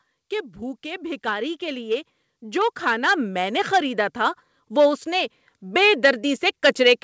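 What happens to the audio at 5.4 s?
At 5.4 s the level is still climbing under automatic gain rising, which runs from 0.29 s to the end. The gain control judged the input too quiet and keeps turning it up. Speech and background swell together, slowly, rather than the voice alone getting louder.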